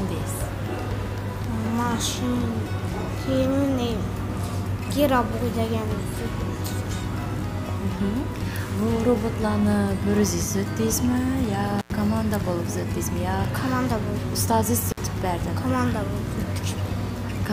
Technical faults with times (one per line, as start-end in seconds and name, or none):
11.79-11.90 intermittent contact
14.89-15.01 intermittent contact